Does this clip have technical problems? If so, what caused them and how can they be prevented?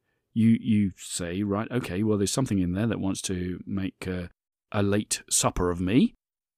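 No, there are no technical faults to report in this speech recording, so there is nothing to trace or prevent.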